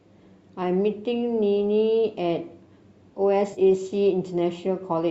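At about 3.53 s to 3.62 s the speech turns briefly smeared and phasey. This is AAC frame loss with concealment. Around 50 ms of audio is missing, scattered over 80 ms, with the longest gap roughly 40 ms. The decoder patched each gap from the last good spectrum, likely in a low-delay AAC stream. Because the gaps are so short, the sound never fades to silence. That sets it apart from a hard dropout, which would cut to a clean gap with clicks at its edges.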